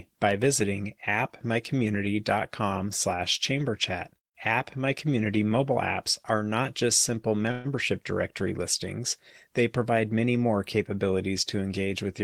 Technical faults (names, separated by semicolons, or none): call audio freeze